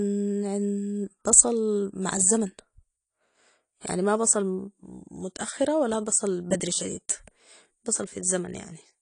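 From start to finish the speech has nothing above about 10.2 kHz, so it sounds dull and boxed-in. On top of that there's a smeared, warbly fizz, most obvious on sibilants and held sounds. That's plainly AAC compression damage, most likely AAC-LC at a low bitrate, around 32 kbps. At that rate the encoder drops the top band and thins out the rest, leaving gaps and swirly substitute texture in the spectrum.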